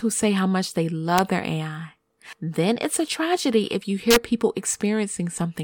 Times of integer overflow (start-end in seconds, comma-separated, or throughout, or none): 1.18, 4.11-4.16